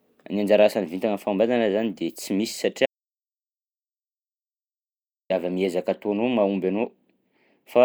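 At 2.86 s the speech cuts to dead silence for 2.44 s, resuming at "avy amy ezaka ataonao": an audio dropout to silence, likely a lost input link.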